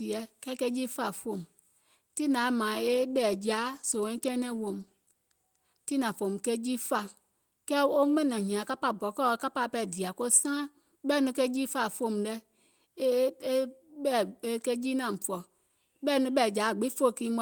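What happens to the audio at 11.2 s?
Nothing goes wrong at 11.2 s; the speech there runs on intact, with no dropout, click, distortion or other fault at that moment.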